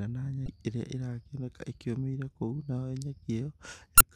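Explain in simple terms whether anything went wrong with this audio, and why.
Damaged data in a compressed stream: corrupted bytes made the decoder lose its place, causing brief blips in the speech at 0.45 to 0.48 s and 3.97 to 4.03 s.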